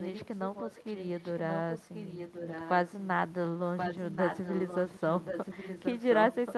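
Echo leak runs from 0.0 to 2.7 s, again from 3.77 to 5.0 s, and from 5.23 s to the end. A second copy of the speech trails the original by about 1.08 s, sitting roughly 10 dB below it in the first stretch and only about 5 dB below in the later two, where it competes more audibly. The likely cause is a far-end loudspeaker whose echo canceller let part of the returned signal through.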